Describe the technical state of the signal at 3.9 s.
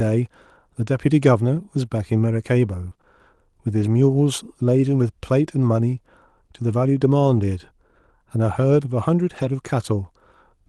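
Just before 3.9 s, from 3.81 to 3.87 s, the speech turns briefly rougher and noisier with no gap or dropout. This is a lost packet rebuilt from error correction. The affected stretch points to two lost packets, about 40 ms of audio. Each following packet carried a low-bitrate copy of the missing one, and the Opus decoder played those coarse copies in place of the originals. The surrounding call audio is limited to 12 kHz.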